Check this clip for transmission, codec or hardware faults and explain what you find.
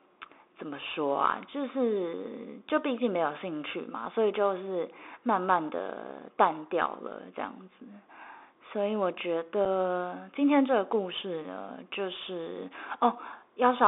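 Two faults are present: the speech runs through a Bluetooth CVSD headset codec for the whole clip, and there are two brief unconcealed Bluetooth headset packet losses.

The CVSD codec colours all of the speech. It encodes each sample as a single up-or-down bit with an adaptive step, which fits a 64 kbps link, and the line passes roughly 300 Hz to 3.6 kHz. The damage is plainly audible: sibilants sound scratchy, loud high-frequency sounds distort where they outrun the step size, and a grainy hiss sits underneath. On a spectrogram, energy stops sharply near 3.6 kHz and thins below 300 Hz, with a speckled noise floor.

The unconcealed Bluetooth headset packet loss occurs at 2.69 s and again at 9.65 s. Each time, about 7.5 ms of audio, likely a single headset packet, never arrived and was filled with silence or an idle pattern rather than being patched over. Each loss is heard as a short, hard-edged dropout or click in the speech. 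In the waveform it appears as a narrow flat notch with abrupt edges, and on a spectrogram as a thin vertical gap or broadband tick.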